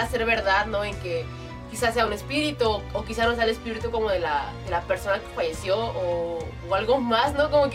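No technical faults can be heard anywhere in the clip. Nothing in it breaks off, repeats or changes level in a way that would point to a problem in how it was captured or carried.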